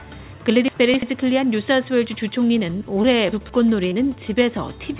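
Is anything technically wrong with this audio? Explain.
Yes. The audio has two kinds of fault, both heard through a call path that keeps nothing above 4 kHz.

Chunks out of order: from 0.68 to 1.02 s, and again from 3.32 to 3.49 s, the sound briefly jumbles. Each time an 85 ms chunk of audio arrived or was written late and played after material that should have followed it. It is three chunks late in the first case and one in the second. Nothing is missing, but the reshuffled order leaves hard joins.

Short concealed packet loss: at 3.02 to 3.06 s and 3.90 to 3.93 s, there is a quick smear or wobble. About 20 ms of audio never reached the decoder in time each time. The receiver covered the gap by extending the preceding sound for roughly 15 to 19 ms and then blending back into the real signal, so the gap becomes a brief blur instead of silence.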